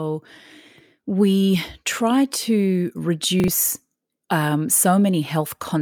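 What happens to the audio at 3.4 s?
Chunks out of order, from 3.4 to 3.48 s, just after "we try to": one 40 ms chunk of speech plays a chunk late, swapping places with the one after it. Nothing is lost, but the reversed order leaves a brief jumbled stutter with three hard joins.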